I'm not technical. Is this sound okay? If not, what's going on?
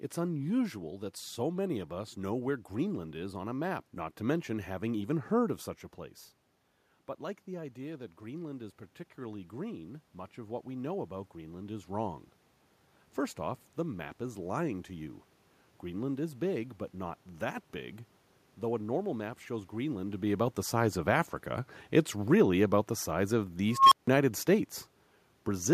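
No. From about 7.2 to 15.0 seconds, the automatic gain rising fault makes the recording slowly turn itself up. Unlike a talker simply leaning closer, as happens around 5.5 and 20 seconds, the room's background noise swells along with the voice, because the whole input is being boosted.

Right after "the size of the", at 23.75 seconds, an unstable filter breaks down. A beep near 1 kHz grows very loud within about 0.17 seconds and distorts. Then the sound drops out completely for about 0.16 seconds, ending at 24.08, while the filter resets. That sudden silence sets it apart from ordinary microphone feedback.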